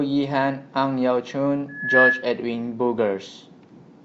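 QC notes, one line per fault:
1.68–2.30 s, loudspeaker feedback squeal: a single tone at about 1.7 kHz rises out of the speech, swelling over roughly a third of a second until it sits something like 10 dB above the talker. The mic is catching its own loudspeaker, and at that frequency the loop gain tips past one, so the tone keeps feeding itself and growing. It stops at about the 2.3 s mark.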